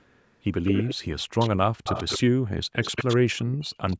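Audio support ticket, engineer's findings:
Echo leak: delayed speech copy trailing by 132 ms at 0.65–0.95, 1.39–1.5, 1.84–2.19, 2.81–3.17 and 3.87–3.97 s. Loud on the longer bursts, about 5 dB under direct speech, faint on the short ones. Likely a loudspeaker-side echo canceller passing residual mic pickup back.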